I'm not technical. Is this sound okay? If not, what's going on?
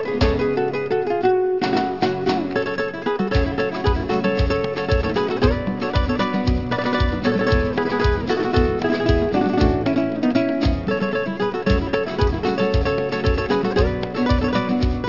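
No. Aliasing runs throughout: high sounds above about 6 kHz fold back as unrelated metallic tones, which fits a careless drop to a 12 kHz sample rate, unlike simple muffling.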